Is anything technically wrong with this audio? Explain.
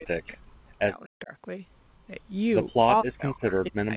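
Yes. Speech suppressed in double talk at 0.0–0.37 s, 0.82–1.33 s and 3.03 s to the end: the speech drops out by as much as about 40 dB, likely because an echo canceller mistook overlapping talk for echo.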